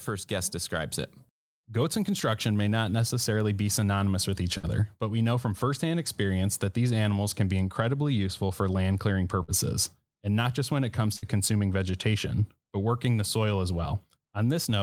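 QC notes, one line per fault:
4.57 to 4.66 s, burst of packet loss after "be synonymous with each". About 56 ms of the last sound is held and fades, then 60 ms is skipped before "but we know from".
9.43 to 9.51 s, burst of packet loss after "useful for land clearing". The receiver stretches the last sound for about 51 ms as a dying buzz or hiss. Then 60 ms is gone.
11.16 to 11.25 s, burst of packet loss after "just when it comes". About 62 ms is filled, then 60 ms is lost before "consuming vegetation but working".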